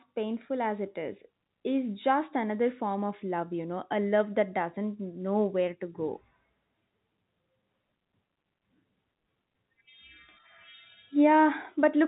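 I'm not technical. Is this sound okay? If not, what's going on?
Yes, this speech recording is in good technical shape: it has the narrow, phone-line sound of G.711 telephone coding, which keeps nothing above about 3.8 kHz, and that is how an ordinary landline call is supposed to sound.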